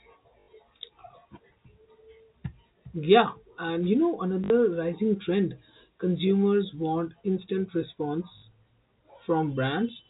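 Packet loss with last packet repeated occurs at 0.40 s for 80 ms, at 4.44 s for 60 ms (just after "you know" and before "rising trend consumers want"), and at 8.38 s for 40 ms. Each time the receiver kept replaying the last packet it held. The lengths fit runs of 20 ms packets, so each gap gives a brief robotic stutter with a buzz near 50 Hz. The narrow telephone band of the G.711 coding can be heard throughout.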